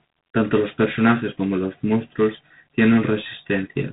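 Throughout the speech, G.726 ADPCM coding is plainly audible. Each sample carries only a few bits of difference from a predicted value. The harsh, rasping hiss rises and falls with the speech level, which fits 24 kbit/s. Nothing passes above 3.8 kHz.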